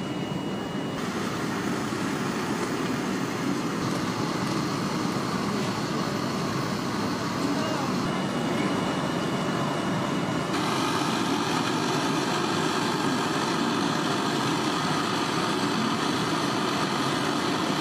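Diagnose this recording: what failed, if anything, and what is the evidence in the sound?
The failure is at the codec stage: compressed frames skipped at 5.86 to 5.91 s. The decoder never played whole frames, either because they were missing from the stream or because it rejected them as corrupt, so the sound jumps ahead by about 50 ms. On a waveform the envelope shifts abruptly; a spectrogram shows a brief broadband discontinuity.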